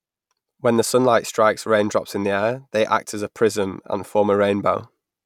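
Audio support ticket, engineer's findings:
No faults found in this speech clip on listening.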